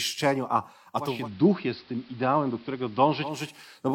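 At 0.94 s the speech shows digital radio blending to analogue. The receiver lost its digital stream and cross-faded over 368 ms to the station's AM broadcast. The sound turns dull. Level drops by about 1 dB. A faint hiss rises, sitting well below the speech. At 3.57 s the receiver blends back to digital, and the full treble returns.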